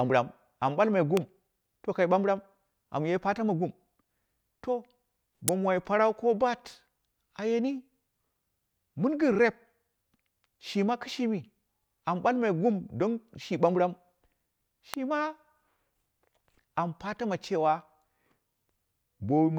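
Sharp snaps cut across the speech at 1.17 s, 5.48 s and 14.94 s. The middle one is the loudest, peaking near -5 dBFS. The other two are softer. Each is likely an electrical switching spike, a brief arc from a nearby switch or motor picked up by the audio line.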